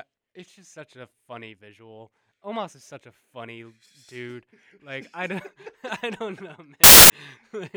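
From 6.84 to 7.10 s, a little over a quarter of a second, the speech is replaced by loud, harsh broadband noise. This is samples built from the wrong bytes: the reader has put each sample's bytes together wrongly, so the fast-changing low-order bits end up as the large part of every value. Unlike ordinary added noise or clipping, it swamps the signal entirely instead of sitting beneath or distorting it.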